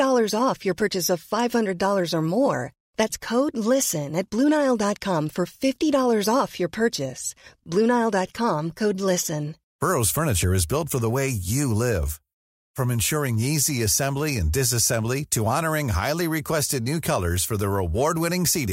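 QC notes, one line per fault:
No faults to note.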